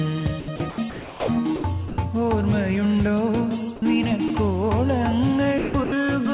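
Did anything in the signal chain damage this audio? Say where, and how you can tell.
Yes, at the call-processing stage: sound chopped by the voice detector at 0.4–1.28, 1.56–1.98 and 5.58–5.92 s, flickering into comfort noise, likely from the sender's detector gating repeatedly.

Sound dropped by the voice detector at 3.76–3.82 and 4.28–4.3 s: brief holes filled with steady noise, likely quiet sound mistaken for background over the 4 kHz-limited G.711 path.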